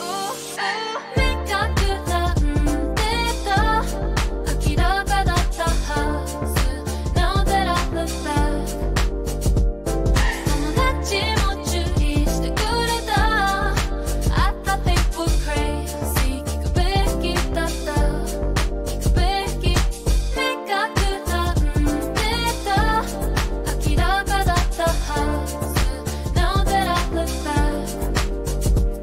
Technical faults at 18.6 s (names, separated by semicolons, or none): repeated buffer